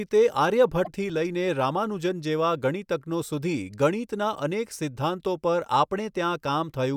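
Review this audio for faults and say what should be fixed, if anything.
Damaged data in a compressed stream from 0.82 to 0.88 s: corrupted bytes make the decoder misread frames and resynchronise, producing a brief glitch in the speech. Transfer the file or stream with checksums or error detection, and resend any damaged frames rather than decoding them.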